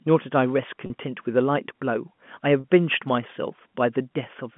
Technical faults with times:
0.86-0.90 packet loss with pitch repetition
2.60-2.64 packet loss with pitch repetition

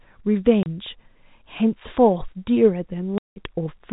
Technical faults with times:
0.63-0.66 packet loss filled with silence
3.18-3.36 packet loss filled with silence

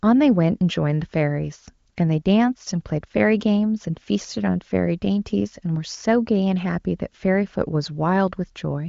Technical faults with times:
none

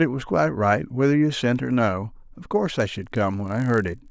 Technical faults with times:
2.80-4.11 resampler restarted on every block

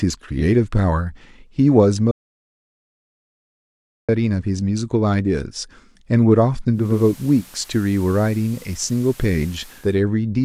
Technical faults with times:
2.11-4.09 audio dropout to silence
6.71-10.00 digital radio blending to analogue

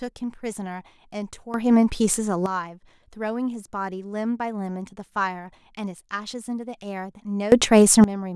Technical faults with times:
1.54-2.46 sudden gain jump
7.52-8.04 sudden gain jump

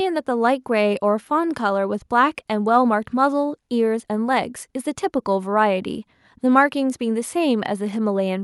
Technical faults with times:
none

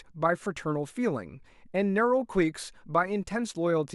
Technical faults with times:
none

